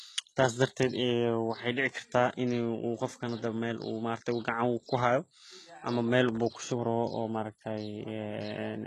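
From start to finish, nothing reaches above 12.3 kHz. The treble sounds synthetic, and s sounds turn gritty and lispy. The likely cause is HE-AAC compression at a very low bitrate, fitting about 16 kbps. It rebuilds the treble from copied lower bands, so harmonics clash.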